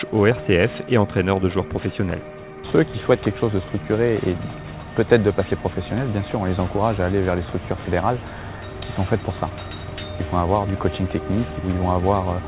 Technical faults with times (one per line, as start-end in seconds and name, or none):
none